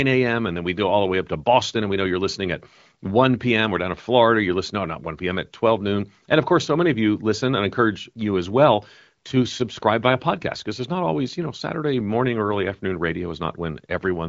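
No technical faults can be heard in this speech clip. It carries the band-limited sound of an AMR wideband (HD Voice) call, with nothing above about 7.5 kHz and at most faint coding texture, which fits one of the higher AMR-WB rates, around 18 kbit/s.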